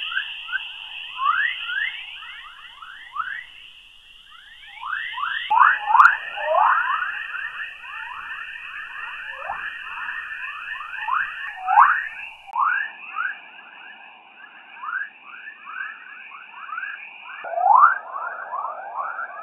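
At 12.51 s, after a 20 ms gap, the audio turns dull and boxy with nothing above 3.8 kHz and faint new background noise, likely from the input switching to a poorer device.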